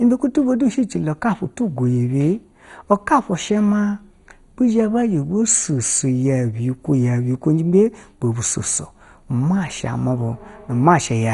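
Throughout, the speech sounds dull and gurgling, with nothing above 11.2 kHz and grainy band flicker, likely heavy MP2 compression at a bitrate near 56 kbps.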